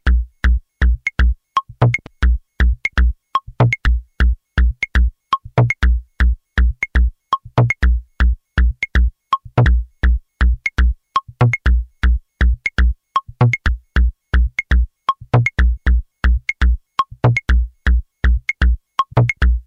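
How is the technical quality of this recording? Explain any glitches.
The recording is marred by repeated dropouts where stretches of the sound go missing.

Compressed frames skipped, at 2.05, 3.85, 9.64, 13.67, 15.76 and 19.12 s: whole blocks of the encoded stream never reach playback, so the sound lurches forward. The jumps are multiples of a 24 ms frame, ranging from a single frame near 3.85 s to roughly 200 ms lost at 2.05 s. Each splice is heard as a sudden jump ahead in the sound.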